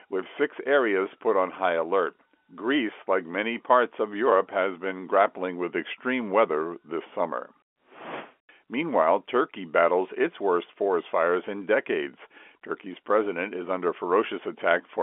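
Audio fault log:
No faults heard in this telephone-band speech.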